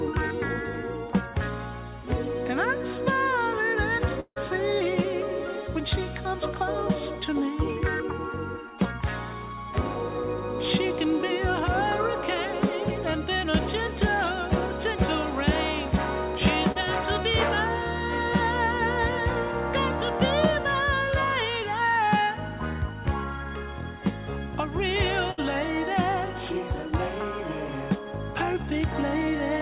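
At 4.2 s there's a hole running to about 4.38 s, likely a long network dropout. Around 160 ms of audio never shows up; the receiver stretches the last sound into a fading buzz or hiss, there's a short stretch of silence near the end, and things pick up further along with that piece gone.

Around 16.72 to 16.77 s you get a short concealed packet loss. Roughly 40 ms didn't reach the decoder in time, so the receiver extended the preceding sound and blended back in. It comes across as a quick smear or wobble rather than a gap.

Then at 25.31 to 25.4 s there's a burst of packet loss, about 60 ms missing in a row. The last sound is carried on and turned down as it goes, a brief held buzz or fading hiss, before the audio resumes with that bit skipped. All of it sits on the narrowband call path, so there's nothing above 4 kHz, which fits G.711 mu-law at 64 kbps.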